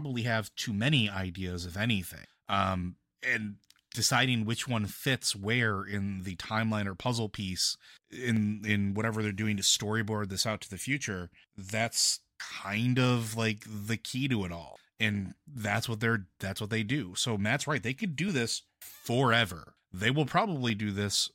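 Single sharp clicks at 5.27 s (after "and deciding which one"), 8.37 s, 18.29 s (before "this forever they will") and 20.7 s are likely dropped samples: under half a millisecond vanishes, the waveform jumps abruptly, and each click shows as a thin vertical spectrogram line.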